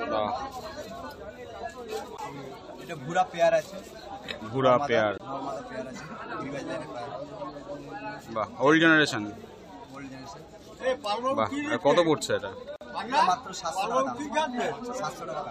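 The audio has two CD skips, at 2.17 s and from 5.18 to 5.20 s: a tiny mute and tick, then a jump as the laser lands on another turn of the spiral. At 12.76 to 12.81 s there's a gap at a join of encoded pieces, a 50 ms hole where separately encoded chunks were butted together with their padding left in.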